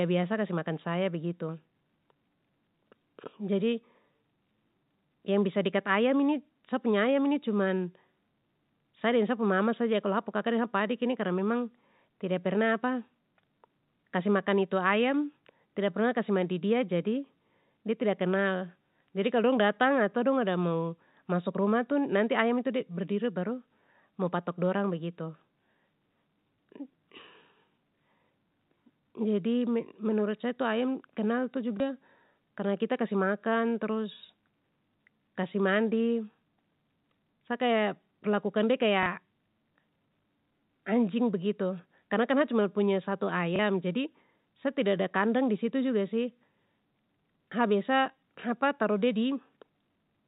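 Packet loss with the last packet repeated occurs at 31.77–31.80 s, 39.03–39.06 s just after "sa kaya perlakukan de", and 43.56–43.59 s. Each 30 ms gap, fitting one lost 30 ms packet, is filled by replaying the previous packet. Each single repeat sounds like a small blip.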